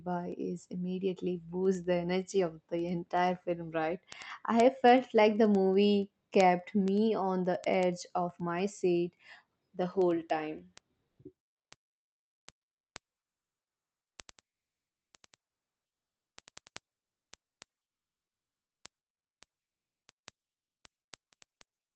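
From 0.13 s to the end of the speech, word clock ticks run at a steady rate of about ten a second. The receiving device runs on its own clock rather than locking to the digital link, and the two drift apart by a couple of hundred parts per million. Each time they slip past each other, a single sample is dropped or repeated. The regular spacing separates this from random clicks or packet loss, which fall irregularly.

From 11.07 to 11.19 s, a 120 ms stretch of the background is replaced by a smooth, featureless hiss about 9 dB quieter than the room sound on either side. That background already sits about 55 dB below the loudest speech. This is comfort noise in place of the background, likely from Opus discontinuous transmission: the sender paused and the receiver filled the gap with synthetic noise. A dropout would leave a hole, but here the level steps down and the texture flattens. The call path's 8 kHz bandwidth limit shapes the whole clip.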